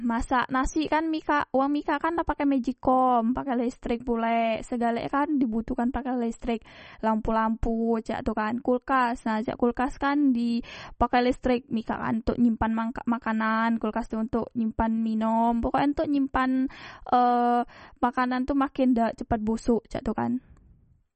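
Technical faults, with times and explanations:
Throughout, MP3 compression: plainly watery, swirly speech with nothing above 8.4 kHz, likely a starved MP3 encode, near 34 kbps, dropping treble and flickering weak components.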